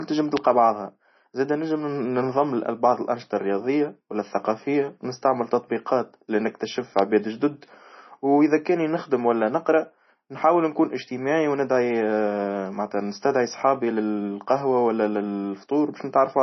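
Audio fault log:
throughout, MP3 compression: watery swirl and a hard cutoff with nothing above 6 kHz, likely MP3 at a bitrate near 24 kbps, unlike a smooth low-pass.
0.37–0.39 s and 6.99–7.01 s, loud pop: single pops about 20 dB then 15 dB above the speech, likely voltage steps, with speech continuing underneath.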